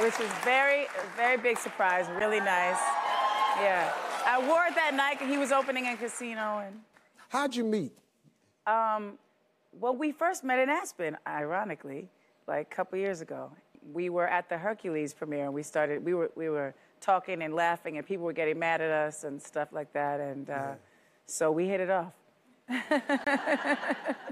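At 2.19 s and again from 23.24 to 23.27 s, a block of samples dropped to silence, producing a block of digital silence. The gaps, about 12 ms and 23 ms, fit 512- and 1024-sample buffers. The abrupt cut and return are heard as a tick first, then a short pop-like hole.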